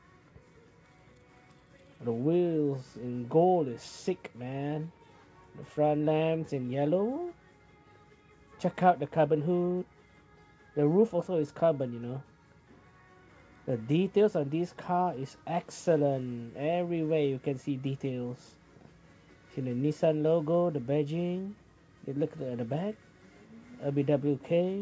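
No technical faults can be heard here.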